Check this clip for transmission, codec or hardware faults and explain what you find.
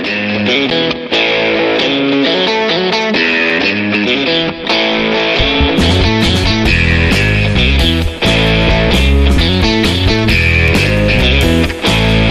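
Three brief dropouts, each a block of digital silence. Short ticks occur at 0.70 s, 3.50 s and 10.68 s. The first hole lasts 8.7 ms and the other two 2.9 ms each, which fits a 128-sample buffer. The output buffer likely wasn't filled in time, so the sound falls abruptly silent and returns with no fade.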